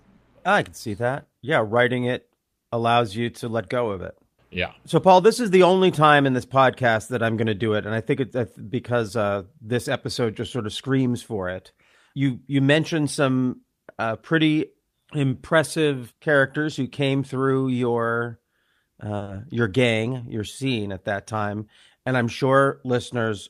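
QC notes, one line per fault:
19.17–19.23 s, short stall from a late packet: a packet arrived about 40 ms behind schedule, so the jitter buffer ran dry and the receiver held the last sound in place for 40 ms until the data turned up, then resumed at the same point. Nothing is lost, but the sound lingers unnaturally, with a faint buzz or dip, and everything after it sits 40 ms later than before.
19.23–19.29 s, short concealed packet loss: immediately after the stall, 40 ms of audio never reached the decoder. The receiver bridged the gap by extending the preceding sound, carrying its pitch forward if voiced or substituting shaped noise if not, then crossfaded into the real signal. The result is a brief smear or wobble right on the heels of the stall.
21.33–21.62 s, jitter buffer speed-up: with audio backed up in the buffer, the receiver trimmed it back by cutting short pitch-period-length slices repeatedly across this stretch, roughly 50 ms in total. 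Playback runs at about 113% speed while pitch stays unchanged, so the speech sounds briefly rushed.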